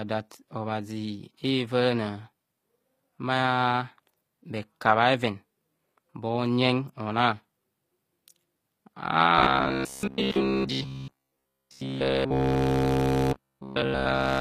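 Speech throughout carries plainly audible codec damage, with nothing above 15.5 kHz. The likely cause is HE-AAC compression, at a low bitrate around 24 kbps: the treble is rebuilt by copying lower bands upward, so harmonics fail to line up across the crossover and sibilants turn gritty. From 9.39 s to the end, the sound becomes a rigid, metallic buzz at 66.7 Hz, which fits a 15 ms buffer. The likely cause is robotic sound from repeated short buffers: essentially all of that stretch is built from repeats of the last buffer while the real audio is skipped.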